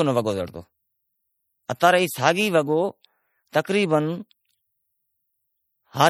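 A speech clip with plainly audible MP3 compression throughout. Weak detail swirls and chirps, which points to a likely low bitrate around 48 kbps. At 1.80 s there is pre-echo. A brief hiss of about 15 ms comes just before a sharp attack, because the codec spread its noise across the block.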